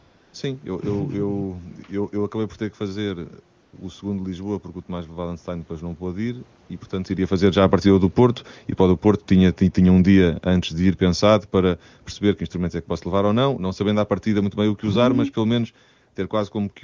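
AMR comfort noise replaces the real background at 0.0–0.33 s, 3.63–3.73 s and 6.67–6.69 s. Speech frames stopped, and the receiver filled these gaps with smooth synthetic noise that switches in and out. Automatic gain falling follows. The control judged the input too loud, or its background too strong, and eased its gain down, so speech and background sink together: by about 3 dB over 7.29–8.15 s after "ir e portanto iria", by about 6 dB over 8.66–12.51 s ending at "é que posso", and by about 4 dB over 13.08–15.77 s after it.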